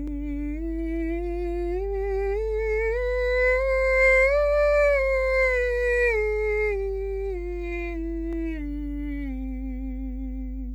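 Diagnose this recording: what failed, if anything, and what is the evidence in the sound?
Mains hum in the analogue wiring: a steady 50 Hz drone runs under the music throughout, fairly loud at about 10 dB below it, pointing to a ground loop.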